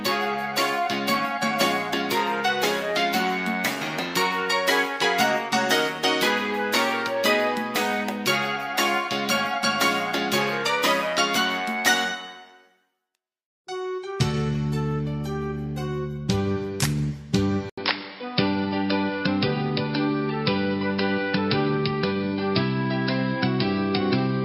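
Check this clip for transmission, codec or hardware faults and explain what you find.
One fault is present. From 17.70 s to the end, after an 80 ms gap, the sound turns dull and boxy, cut off above 5.3 kHz, about 5 dB different in level, with new background noise. This is likely an input switched to a poorer, narrower-band device.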